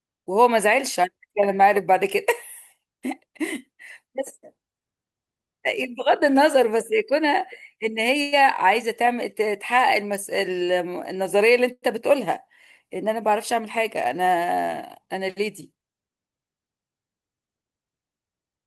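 Speech with two call audio freezes and one jitter buffer speed-up. At 8.21 s the sound is stretched into a decaying buzz or hiss for 108 ms, and at 11.72 s for 101 ms, the last 40 ms fading to silence. Packets were likely held up until the jitter buffer ran dry, so each freeze inserts a gap and the speech then resumes where it stopped, with nothing lost. From 15.06 to 16.09 s the speech runs at 108% speed with unchanged pitch, sounding hurried. The buffer shortened its backlog by cutting pitch-period-sized slices, about a tenth of a second in total.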